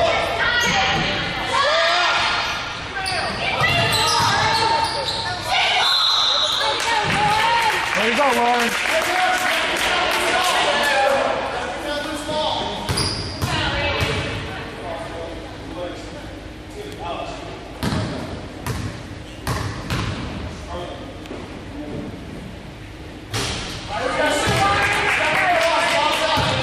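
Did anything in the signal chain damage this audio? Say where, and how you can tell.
Yes, at the codec or storage stage: compressed frames skipped at 11.06, 13.08 and 16.11 s, each losing roughly two frames, around 50 ms.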